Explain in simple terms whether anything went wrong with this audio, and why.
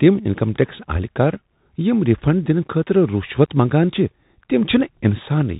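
Something did go wrong. The whole clip has passed through a Bluetooth CVSD headset codec. This old phone-quality link drops everything above 4 kHz, so the speech sounds muffled. S sounds turn scratchy, loud bright sounds distort, and a grainy hiss runs underneath.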